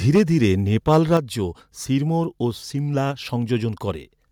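From 0.15 to 0.45 s, an input level likely set too high drives the converter about 6 dB past its limit. This microphone overload flattens the peak tops into a harsh crackle. At 0.18 s the microphone volume is stepped down, likely by call software reacting to the clipping, and speech and background drop by about 2 dB at once. From 0.87 to 1.17 s the overload recurs, likely from the same excessive input, about 3 dB over, with the same gritty edge. At 1.17 s a second step down, likely another automatic correction, abruptly cuts the level by about 5 dB.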